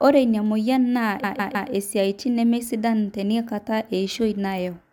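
From 1.23 to 1.7 s the speech stutters as one 157 ms block replays three extra times. These are repeated frames: compressed data sent again, adding 0.47 s.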